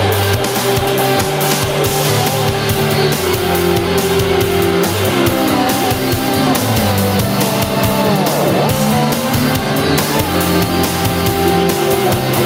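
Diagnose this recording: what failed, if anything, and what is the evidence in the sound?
Gain pumping throughout: the gain swells in gaps and ducks by around 5 dB under each loud sound, likely excessive input gain driving a fast limiter.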